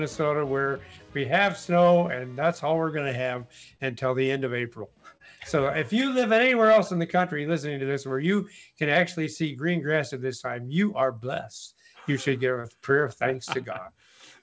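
Brief smears at 3.77 s, 5.17 s and 12.60 s, each about 50 to 60 ms long, are short concealed packet loss. Around 30 ms of audio missed the decoder each time, so the receiver continued the preceding sound and blended back.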